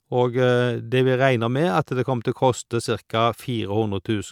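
A short speech recording with nothing technically wrong with it.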